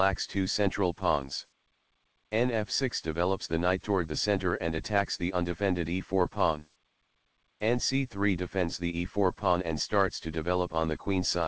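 No faults are audible; the audio has come over a call path whose band stops at 8 kHz, which fits G.722 wideband coding at 64 kbps.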